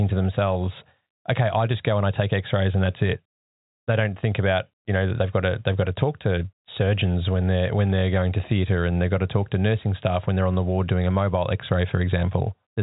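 No technical faults can be heard in the speech, which comes through G.711 telephone coding with nothing above about 3.8 kHz.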